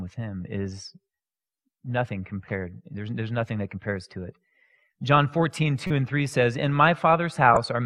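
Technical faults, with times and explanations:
5.84–5.91 s and 7.54–7.57 s, corrupt frame decoded: two short bursts of wrong-sounding energy, the first reaching around -10 dBFS and the second, louder, around -5 dBFS. Each spans roughly a couple of compressed frames whose bits were damaged but still decoded. Misread gain values and spectral codes place energy at frequencies that don't belong to the sound, so each burst is a brief chirp or noise blip lasting only as long as the damaged frames.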